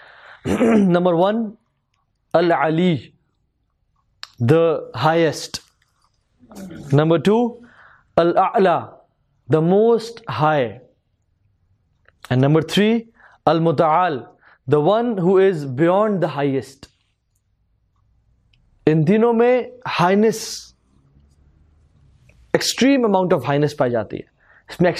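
No technical faults detected.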